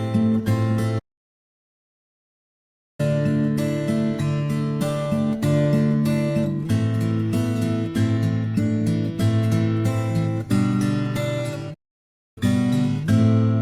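A playback stall, likely from the player running short of data, cuts the sound to silence from 0.98 to 3.00 s, then again from 11.74 to 12.38 s.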